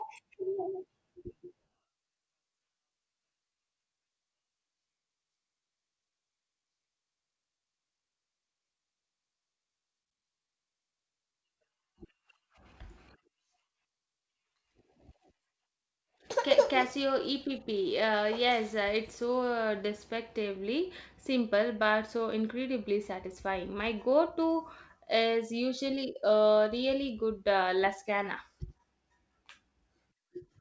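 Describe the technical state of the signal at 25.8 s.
The signal at 25.8 s sits inside a stretch of repeated timing corrections running from 0.50 s to 29.71 s. The receiver keeps repeating short pieces to stay in step. Together they stretch the audio by roughly half a second, so playback runs at 98% speed. At most this is heard as slight hiccups and an unsteady tempo.

The cause is clock drift between sender and receiver, present throughout the clip. The sender's clock runs about 2% slow, so the jitter buffer keeps draining and must be padded. The call path's band limit at 8 kHz, which fits G.722, is present beneath it.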